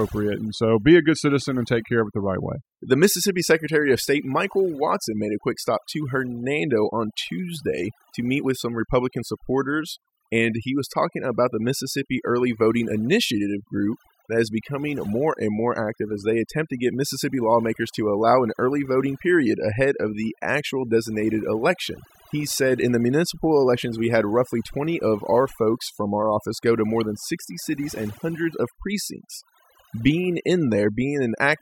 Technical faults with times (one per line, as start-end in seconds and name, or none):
0.00-31.61 overdone noise removal